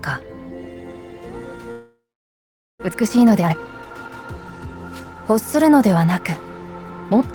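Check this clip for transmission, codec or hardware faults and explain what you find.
Two transmission faults appear, one right after the other.

From 1.71 to 2.84 s there is a long network dropout. The last sound is stretched into a fading buzz, then about 0.81 s of near-silence follows, and when the audio resumes roughly 0.6 s of material is gone. The likely cause is a stall in packet delivery, during which the receiver's concealment ran out. Unlike a brief packet-loss glitch, the gap is too long to mask, so the content visibly skips ahead.

From 2.87 to 4.75 s comes a jitter buffer speed-up. After the stall, delayed packets arrived together and the buffer held about half a second more than its target. To drain it, the receiver cut many short pitch-period segments, so the sound plays about 125% fast and feels hurried. What separates this from a simple resampling speed change is that the pitch stays the same and only the timing compresses.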